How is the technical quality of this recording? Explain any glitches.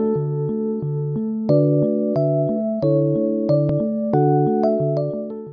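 Nothing stood out as a glitch or technical problem on listening to this recording.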